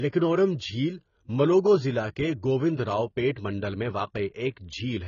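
From start to finish the speech is dull and smeared, with nothing above 7 kHz and a fizzy, warbling texture on sibilants and held vowels. This is likely AAC compression, heavy damage that fits AAC-LC at a bitrate around 16 kbps, where the encoder drops the top band and leaves holes between quantised frequency lines. A simple low-pass filter would remove the highs cleanly, without this shifting, watery grain inside the remaining band.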